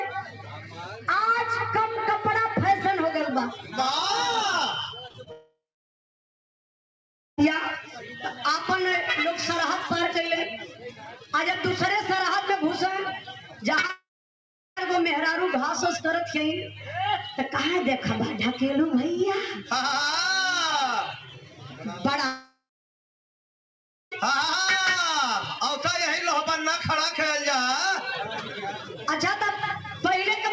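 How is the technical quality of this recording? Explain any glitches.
The recording has clear network-loss damage in three places. Its bandwidth stops at 8 kHz, which fits a wideband call codec such as G.722.

Repeated packet loss (robotic sound) runs from 5.08 to 5.28 s. Three gaps, the longest 23 ms, were each patched by extending the preceding sound. About a third of that span is synthesised, so it comes out choppy, with fragments missing.

Long network dropouts are the likely cause of three outages: 5.32 to 7.39 s, 13.91 to 14.78 s, and 22.26 to 24.13 s. In each one the last sound is stretched into a fading buzz or hiss and then goes silent, for roughly 1.8 s, 0.7 s and 1.5 s respectively. The audio then resumes with that section gone.

Short concealed packet loss hits at 13.81 to 13.85 s and 13.87 to 13.91 s, each losing about 20 ms just before the second dropout. The decoder fills each hole by extrapolating the prior sound and blending back in, which leaves a brief smear or wobble.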